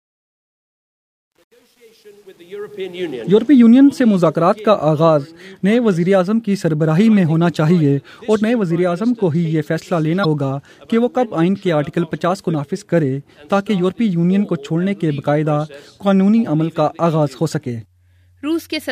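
From the start of the clip to 3.14 s, the fade-in shows truncation distortion on a fade. The gain ramp itself rises smoothly from near silence, but the stage applying it drops the low-order bits without dither, so the quietest part is built from only a few coarse amplitude steps. Between 0.0 and 2.57 s the sound is gritty, which fits a path keeping only about 9 bits. It cleans up as the level climbs toward 3.14 s.

At 10.21 to 10.25 s there is damaged data in a compressed stream. For about 40 ms the decoder is fed corrupted frames that it cannot read correctly, loses frame sync, and hunts for the next valid header before normal decoding resumes. The result is a brief glitch, heard as a chirp, squawk, click or short hole.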